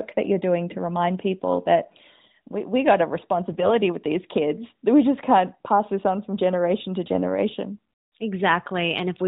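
Speech over a narrowband AMR link, with two bursts of AMR bit errors: 3.52 to 3.73 s, after "we we got a", and 7.06 to 7.21 s, after "on from generation to". Flipped low-priority frame bits misplace excitation pulses, so pitch and level hold but the voice turns briefly hoarse and gargly.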